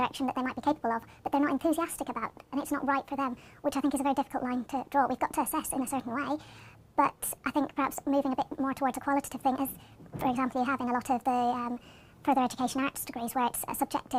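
From start to finish the clip shows a wrong sample rate fault. The audio plays back 1.5 times faster than it should, and its pitch rises by about 7 semitones, a musical fifth, at the same time. Speed and pitch shift together by the same ratio, which points to samples captured at one rate and clocked out at a higher one with no resampling, consistent with 32 kHz material played at 48 kHz. Everything sounds high and hurried.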